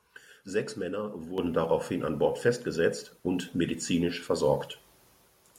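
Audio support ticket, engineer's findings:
Microphone volume stepped up at 1.38 s: speech and background noise floor both jump about 8 dB at once, in a single step. Probable component is the capture device's input gain, raised by the call software after judging the mic too quiet. Background rising with the speech rules out the talker getting louder or moving closer. The instant step, with no gradual ramp, fits a one-time device volume change.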